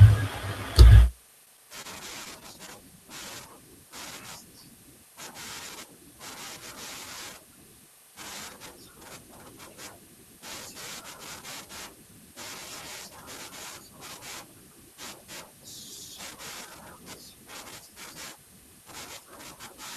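Between about 1.45 and 2.77 s the speech hits repeated stalls, a real stutter: eight short hitches where delivery fell behind playback and the jitter buffer kept running dry. Each time, the receiver just stretched the last bit of sound to cover the wait, about 98 ms in total, with the longest single gap around 26 ms. Nothing's actually lost, but that stretch sounds jerky and dragged.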